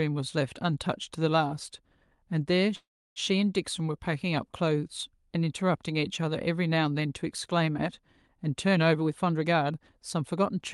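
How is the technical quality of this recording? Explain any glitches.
The recording has two clear glitches, both typical of audio carried over a call link, where the spectrum stops around 12 kHz as Opus-coded call audio does.

Call audio freeze, 2.75 to 3.19 s: the sound stalls for about 0.4 s. The receiver probably ran out of buffered audio because packets were likely held up in transit, so it stretched the last sound into a fading buzz that sinks to silence for roughly 0.3 s. When audio resumes it picks up exactly where it stopped, so nothing is lost, but everything after it arrives later. On a waveform this shows as a decaying tail and then a flat gap. On a spectrogram a smeared, fading band is followed by an empty column.

Jitter buffer speed-up, 8.98 to 10.57 s: the speech runs at about 116% of normal speed while the pitch stays the same. Too much audio had built up in the buffer, and the receiver caught up by repeatedly cutting out pitch-period-length slices, about a third of a second in total. 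The result sounds hurried. A waveform shows syllables packed more tightly together. On a spectrogram the harmonics stay at the same height while syllables become visibly shorter.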